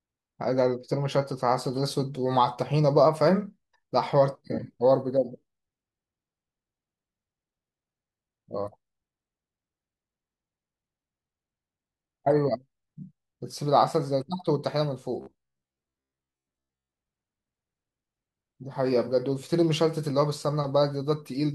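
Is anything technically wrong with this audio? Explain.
Yes. From 15.21 to 16.92 s the speech has robotic sound from repeated short buffers. New audio likely reached the playback software too slowly, so it filled the gaps by looping its last chunk, about 15 ms long, while the real audio was skipped. Looping that chunk for most of the stretch imposes a fixed 66.7 Hz buzz, one over the chunk length. The voice becomes a stiff, metallic drone that only loosely follows the speech.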